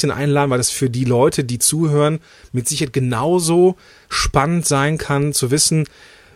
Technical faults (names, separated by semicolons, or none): none